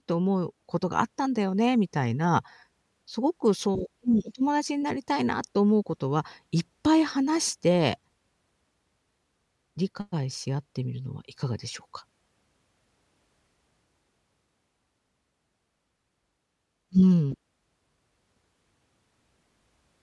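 A speech recording, and nothing is technically wrong with it.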